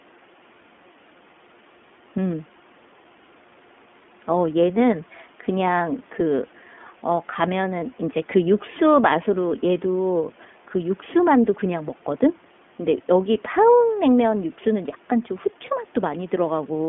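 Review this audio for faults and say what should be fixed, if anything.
The whole recording carries iLBC codec damage, and it's plainly audible. The speech sits in a telephone band of roughly 200 Hz to 3.4 kHz, with nothing above 4 kHz. iLBC codes each frame's excitation on its own, which fits 20 ms frames in the 15.2 kbps mode. That's where the rough, slightly synthetic texture comes from. To prevent it, run the call on a wideband codec such as Opus or G.722 instead of iLBC.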